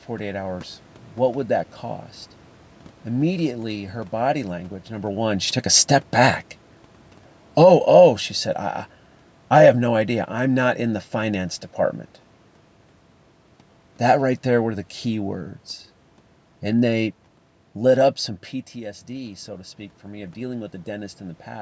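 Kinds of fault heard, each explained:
Automatic gain falling: from 5.17 s to 11.49 s, just after "her body language number", the automatic gain control judged the input too loud or its background noise too strong and eased its gain down by about 6 dB, so the speech and the room noise behind it sink together.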